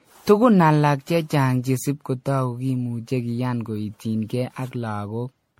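Generation loss throughout, likely from roughly ten MP3 re-encodes near 64 kbit/s, makes speech swirly, hollow and smeared, blurs attacks, and leaves nothing above 16.5 kHz.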